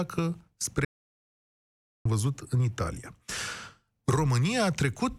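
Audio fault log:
0.85–2.05 s: audio dropout to silence. The speech cuts out abruptly and about 1.2 s of silence follows, with no room tone, before returning mid-flow at "văzut în". The input was likely lost, a disconnect or mute, while recording continued writing silence.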